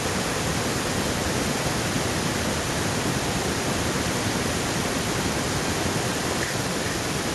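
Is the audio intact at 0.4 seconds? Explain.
No, at 0.4 s there's echo with no canceller, present throughout: the far-end loudspeaker bleeds into their mic, returning your speech about 8 dB down, roughly 400 ms late, and thin.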